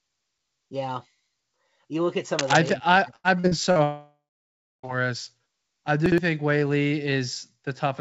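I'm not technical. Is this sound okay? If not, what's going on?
No, the speech in this clip has four separate problems.

From 2.38 to 2.73 s, right after "look at", there is a burst of scratching and rustling: cable scratch noise, likely from a worn cable or plug being moved. The speech keeps going underneath; nothing drops out, it is just covered by noise.

From 3.16 to 3.78 s there is repeated packet loss, which sounds choppy and robotic. Four small pieces went missing, the longest about 80 ms, and each was patched by stretching the sound just before it. About a third of that stretch is patched-over filler.

From 3.83 to 4.86 s comes a long network dropout, most likely a brief connection stall. About a second of audio never arrived. A fading buzz fills the start, then roughly 0.64 s of silence. Unlike the choppiness just before, this is one long hole, not many short ones.

From 6.06 to 6.18 s there are chunks out of order: a 60 ms piece plays one slot later than it should. 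Nothing is lost, but that moment sounds jumbled.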